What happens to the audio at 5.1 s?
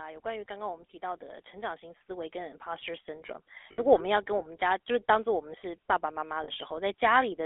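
At 5.1 s the speech sounds buzzy and gravelly, squeezed into a narrow telephone band of roughly 300 Hz to 3.5 kHz. This is GSM full-rate codec damage, present throughout the clip: the codec models the vocal tract and drives it with regularly spaced pulses, which produces the coarse roughness, and it discards everything above the band, which fits a 13 kbps full-rate encode.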